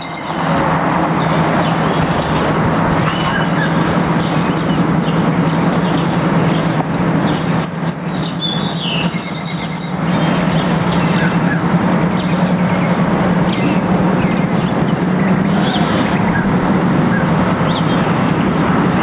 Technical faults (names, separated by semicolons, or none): gain pumping